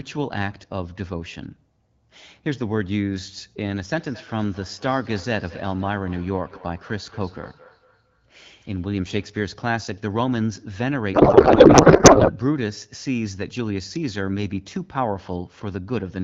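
A speech recording, carried as wideband HD Voice whose clean sound fits AMR-WB at around 12.65 kbit/s, with two faults. From 3.92 to 9.39 s, two devices on the same call share a room, so one microphone picks up the other's playback and no echo canceller removes it. This feedback echo between two devices returns each stretch of speech about a fifth of a second later, thinner and ringing, peaking at about -19 dB below the speech. From 11.13 to 12.31 s, the receiver unpacks the codec frames differently from the sender, which points to octet-aligned AMR being read as bandwidth-efficient. This codec payload misread turns the speech into garbled noise and warble that barely follows it.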